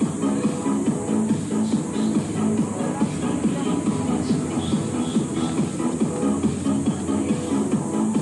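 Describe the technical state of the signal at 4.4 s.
At 4.4 s the signal is intact, with no dropout, distortion, glitch or other audible fault at that moment.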